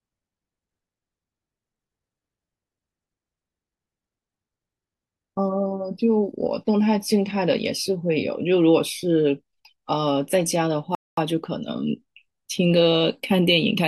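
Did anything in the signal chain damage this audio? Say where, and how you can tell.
Yes. The damage happens at the playback stage. The speech cuts to silence at 10.95 s and stays silent until 11.17 s, a gap of about 225 ms, before the sound resumes. That abrupt dropout in mid-flow, with no fade, is the signature of a playback stall: the output had nothing to render for that interval. The likely cause is the player running short of buffered data or its audio thread being blocked until it recovered.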